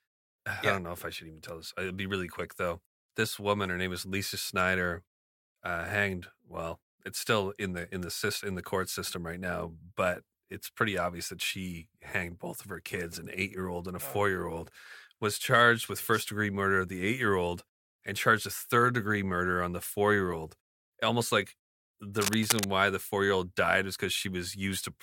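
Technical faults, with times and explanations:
22.21 to 22.65 s, cable scratch noise: a dense, uneven burst of scratching over the speech at roughly its level, likely a worn cable or connector being moved.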